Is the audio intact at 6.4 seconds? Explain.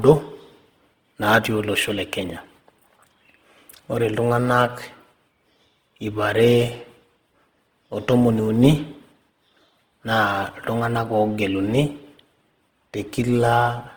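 No, at 6.4 s the speech carries Opus compression throughout, likely from a low-rate CELT encode near 16 kbps: starved bands are noise-filled, making tones rough and grainy.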